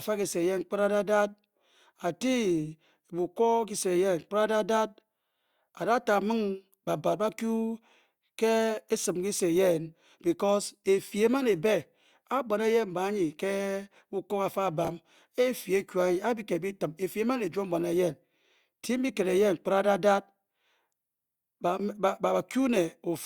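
At 14.85 to 14.88 s, a chunk of audio arrived or was written late, so the playback shows chunks out of order. A piece about 10 ms long was played two chunks after its proper place, behind the two segments that should have followed it. No speech is lost; the same 30 ms of sound is simply reshuffled. That creates three hard joins in quick succession, heard as a brief jumbled stutter.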